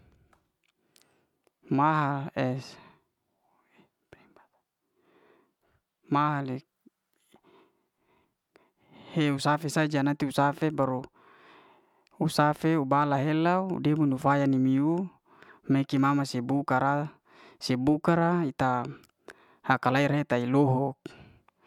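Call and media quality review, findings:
No faults found: the speech signal stays continuous and stable in level, timing and bandwidth throughout, with nothing to trace to the capture, processing or transport path.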